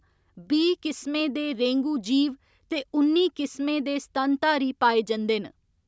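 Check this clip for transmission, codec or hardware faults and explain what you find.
No transmission, codec or hardware fault can be heard in this speech clip. It has passed through a call's microphone processing, which leaves nothing above 8 kHz and trims the lowest bass, as that path normally does.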